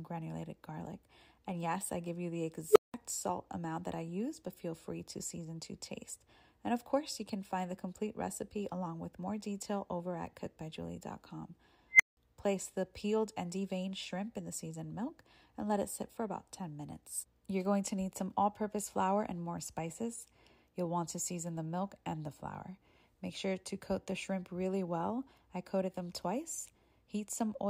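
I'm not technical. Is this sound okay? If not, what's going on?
No. At 2.71 to 2.94 s and 11.92 to 12.17 s there's an unstable filter: a processing step runs away, so a tone (low, around 400 Hz, then a high squeal near 2 kHz) swells within a fraction of a second, then cuts to silence for under a fifth of a second. Ordinary feedback howl builds more slowly and doesn't drop out like that.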